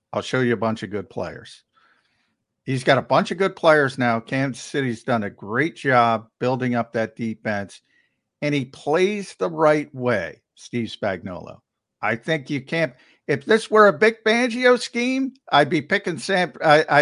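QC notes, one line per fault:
No faults found.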